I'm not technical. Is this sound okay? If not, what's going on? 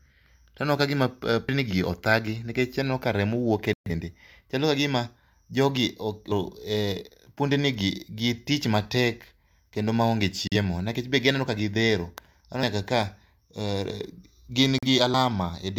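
No, there are two separate problems in this speech recording.

The first is a dropped buffer (overrun), heard at 1.49, 6.32, 12.63 and 15.14 seconds. Each time the speech jumps forward, because a chunk simply isn't there. The missing bits are short: roughly a fifth of a second at 1.49, nearly a third at 6.32, and about a tenth at the last two. The likely cause is the recording software not picking up the audio in time, so the next chunk wrote over it.

The second is a digital broadcast dropout. The sound briefly goes silent from 3.73 to 3.91 seconds, and again in shorter gaps from 10.48 to 10.56 and from 14.78 to 14.87 seconds. This is what happens when a digital receiver loses the signal and mutes until it gets clean data again. The first gap is the longest, at about an eighth of a second, which fits three bad frames in a row. Anything said during those gaps is gone.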